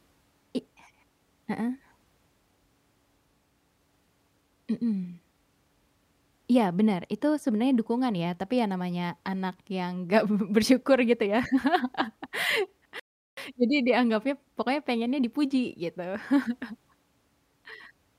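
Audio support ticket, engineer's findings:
Playback stall, 13.00–13.37 s: player likely starved of buffered data or its thread blocked; speech drops to silence for 0.38 s, resuming at "jadi dianggapnya pokoknya pengennya".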